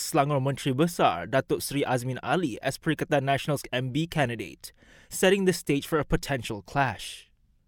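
A speech recording with no technical faults to point to. Nothing in the audio marks a problem at any point.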